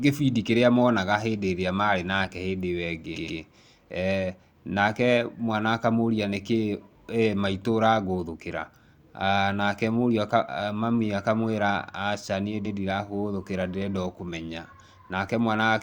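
At 3.15 s the speech stutters: a 120 ms slice plays twice more, running to 3.39 s and adding 240 ms. At 12.65 s the same fault returns as a single extra 120 ms play, ending at 12.77 s. These are repeated frames: a short run of compressed frames was written or sent again, so the decoder played the same audio over. Unlike a dropout, nothing goes missing. The identical slice simply recurs, and the clip grows longer.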